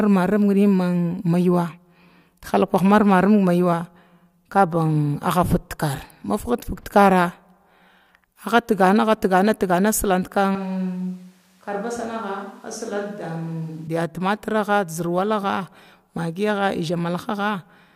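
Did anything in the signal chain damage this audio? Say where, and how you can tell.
Yes, at capture: from 10.55 to 13.87 s the speech turns abruptly roomy and thin and drops about 5 dB, likely a switch to a distant microphone. The spectrogram shows lost bass and a raised noise floor.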